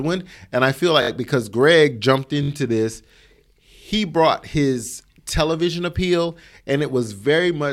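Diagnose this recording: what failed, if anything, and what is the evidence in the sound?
The failure is at the driver or buffer stage: a repeated buffer, heard twice in this speech. At 1.02 s and again at 2.43 s, a fragment of about 21 ms plays three extra times, giving a stutter of roughly 64 ms with a hard join at each repeat. That fragment length fits a 1024-sample buffer. New audio missed its deadline, so the device replayed the last buffer rather than output silence. The speech then resumes without any audible gap.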